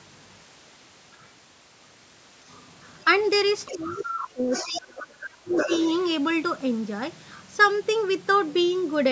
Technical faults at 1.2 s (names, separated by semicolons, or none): other side's voice leaking through